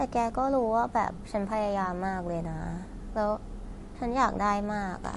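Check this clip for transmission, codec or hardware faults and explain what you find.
There's one fault, and it runs through the whole clip: MP3 compression damage, and it's plainly audible. Nothing comes through above about 11.3 kHz, and the speech has that watery, swirly texture, with s sounds going chirpy and metallic. That's likely a starved encoder, and the damage fits something around 48 kbps, cutting the treble and toggling weak frequency lines on and off between frames.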